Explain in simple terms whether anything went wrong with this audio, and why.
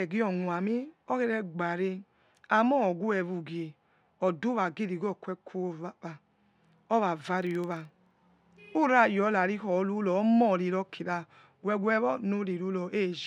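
A filter restarted on every block, from 7.38 to 8.18 s, puts a low, rattling buzz under the speech. A filter is meant to carry its memory smoothly from one chunk of audio to the next. Here it forgets everything and starts each chunk from silence, so every chunk begins with a tiny click. Those clicks repeat about 23.4 times a second, which fits chunks of 2048 samples, and they grow louder when the speech gets louder.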